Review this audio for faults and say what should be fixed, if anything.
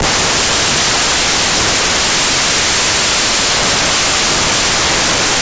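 Samples built from the wrong bytes run through the whole clip, so the speech comes with loud, harsh broadband noise. The reader is assembling each sample's bytes wrongly, letting the jittery low bits become the dominant part of every value. To prevent it, make sure the reader's byte order, offset and sample alignment match what the file actually declares.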